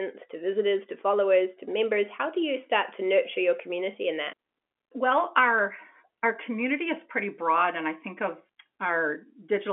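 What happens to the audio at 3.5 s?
Nothing goes wrong at 3.5 s: the speech carries on intact through that moment, with only the usual narrow telephone band of G.711 coding, nothing above about 3.8 kHz.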